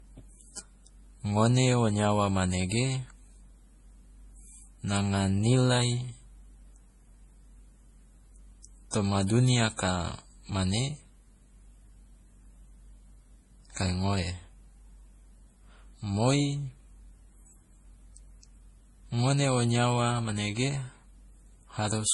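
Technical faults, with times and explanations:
Throughout: transcoding between lossy codecs. The speech has stacked compression artefacts and nothing above 11.4 kHz. This likely comes from a roughly 32 kbit/s MP3 re-encoded as Vorbis near 46 kbit/s, the second encoder spending bits on the first one's damage.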